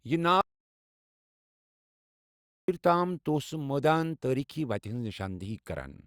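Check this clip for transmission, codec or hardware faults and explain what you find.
There's one clear fault here: an audio dropout to silence from 0.41 to 2.68 s, losing about 2.27 s of speech. The input was likely cut off, by a lost link, a disconnect or a mute, while recording carried on writing silence. The speech stops abruptly into dead silence with no room tone, then snaps back mid-flow.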